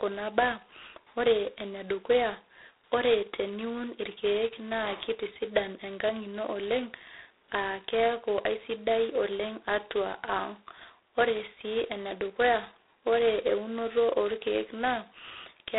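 From start to finish the speech carries G.726 ADPCM damage consistent with the 16 kbit/s mode: only two bits code each prediction error, so a harsh, rasping hiss rides on every syllable and swells with level. A spectrogram shows the 300 Hz to 3.7 kHz band, empty above 3.9 kHz, with grainy noise filling the bursts.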